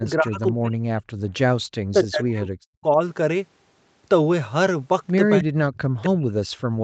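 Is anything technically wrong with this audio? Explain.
Yes, two problems. Speech suppressed in double talk: from 0.00 to 1.26 s, 1.93 to 3.00 s, and 5.40 s to the end, the voice dips by up to about 40 dB. This is likely the echo canceller ducking everything while both sides talk. Echo leak: at 0.47–0.52 s and 1.33–1.39 s, faint scraps of the voice return about 267 ms late. That's likely speaker audio slipping past the far end's canceller, very quiet first, then somewhat louder.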